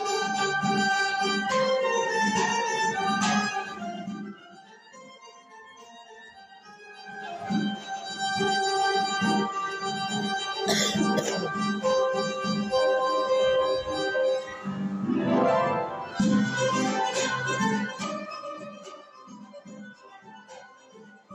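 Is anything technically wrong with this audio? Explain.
No, nothing in the signal stands out as a technical fault, and the audio holds together without any audible defect.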